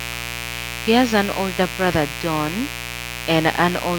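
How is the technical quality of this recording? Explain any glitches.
The recording has one clear fault: a mains buzz under the speech for its whole length. Switching spikes from the 60 Hz supply leak in, adding harmonics. The result is a steady, raspy buzz sitting close beneath the voice.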